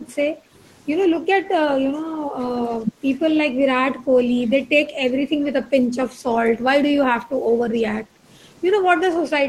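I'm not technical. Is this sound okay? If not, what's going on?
No, not quite. The call's echo canceller, the part that stops the other person from hearing themselves, is being too heavy-handed.

First, there is background gated by the echo canceller. Whenever the loudspeaker played, the canceller turned the microphone down hard to block the echo, and the room sound went with it. You can hear the background briefly sink or vanish at 0.35 to 0.52 s, 1.2 to 1.33 s and 3.94 to 4.16 s, then come straight back.

Second, the speech itself gets clipped in three short bursts, at 2.59 to 2.66 s, 2.83 to 2.92 s and 7.97 to 8.05 s. The talker briefly drops in level, lightly at first and much more sharply near the end. This is likely speech suppressed in double talk: with both sides talking at once, the canceller mistook the talker's voice for echo and turned it down too.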